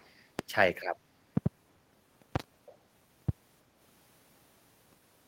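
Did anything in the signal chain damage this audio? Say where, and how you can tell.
Yes. An echo leak, likely from an echo canceller in call processing, shows as faint delayed copies at 0.00–0.13 s and 2.66–2.76 s. The consistent 0.32 s lag distinguishes them from room reverb.

Loud pops, likely from the analogue wiring or a driver glitch, sit far above the speech at 0.39–0.42 s, 1.37–1.48 s (double), 2.36–2.42 s (double) and 3.29–3.31 s. Unlike clipping, the speech continues underneath.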